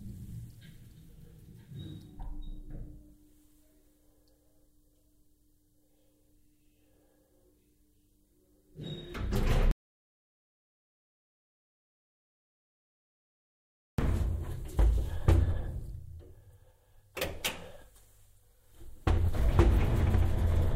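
The input feed was likely interrupted, through a disconnected device, a broken link or an accidental mute, while the recorder kept writing silence. That is an audio dropout to silence, from 9.71 s to 13.98 s. The sound stops abruptly in mid-flow and resumes just as suddenly about 4.27 s later. The gap between is silent, with no background or room tone, and whatever sounded during that stretch is lost.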